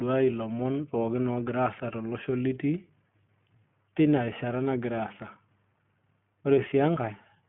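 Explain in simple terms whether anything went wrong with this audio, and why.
The speech sounds thin and muffled from start to finish, like a phone call, with a slightly rough, synthetic edge. That is the iLBC codec, a phone-line voice codec that keeps roughly 150 Hz to 3.4 kHz and rebuilds each short chunk, about 20 ms, on its own.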